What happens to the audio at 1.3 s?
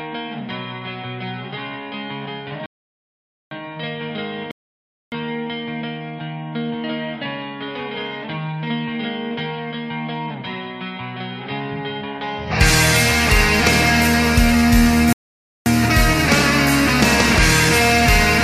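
Nothing goes wrong at 1.3 s; the audio plays through that moment intact, with no dropout, click, distortion or other fault.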